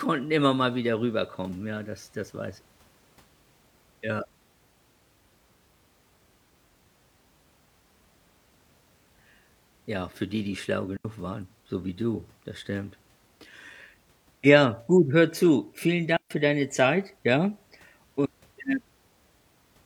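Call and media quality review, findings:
Digital wireless dropout, 10.97–11.05 s: clean hole of near silence, about 79 ms, after "für die die schlau", before "waren so wie du". Probable component: digital RF link. Receiver lost too much data and muted with a very short fade.

Digital wireless dropout, 16.17–16.31 s: same clean mute, about 141 ms, just before "für deine". Same link and mechanism.

Unlike an analogue RF dropout, no noise burst or squelch crackle at either edge.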